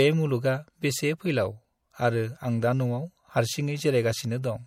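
From start to finish the speech has plainly audible codec damage and nothing above 17.6 kHz, with a watery, swirly edge. That's likely MP3 compression at a bitrate that fits 64 kbps, with the encoder cutting the treble and dropping weak frequency detail frame to frame.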